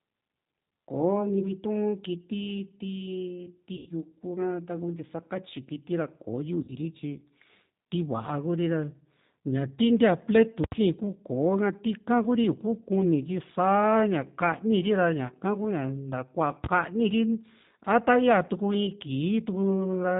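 G.729 coding runs through the whole speech recording, and its damage is plainly audible. The sound points to the G.729A variant at about 8 kbit/s. The codec rebuilds each 10 ms frame from a vocal tract filter, a pitch predictor and a handful of pulses. That leaves the voice intelligible but rough and faintly synthetic, with nothing above 4 kHz, so sibilants sound dull.

VoIP packet loss concealed by the speech codec interrupts the speech at 3.77 to 3.89 s, again at 6.63 to 6.72 s, and briefly at 15.27 to 15.31 s. The lost stretches are about 90 ms, 50 ms and 20 ms. At each gap the decoder keeps extending the last pitch and filter while lowering the gain, so the sound smears into a fading buzz or coloured noise. Because each frame builds on the one before, the voice stays weakened for a moment after the audio resumes.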